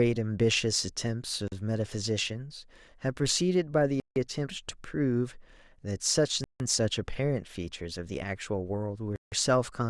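Abrupt dropouts, a 40 ms gap at 1.48 s and 160 ms holes at 4.0, 6.44 and 9.16 s, are blocks of digital silence where the sound cut out to silence.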